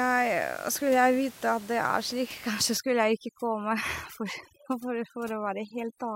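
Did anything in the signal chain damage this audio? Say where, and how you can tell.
Yes: overdone noise removal in call processing from 2.77 s onward turns room noise, about 21 dB below speech, into twinkling specks. The spectrogram shows isolated bins blinking on and off.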